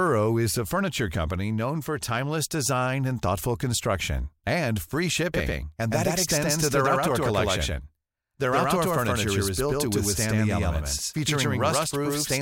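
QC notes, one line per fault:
5.34 s to end, doubled audio track: a second full-band copy of the speech enters abruptly, about 100 ms late and roughly as loud, with no decay or room colour. The likely cause is a slower second capture path. The waveform shows every onset twice, and the spectrogram shows duplicated, offset harmonic stripes.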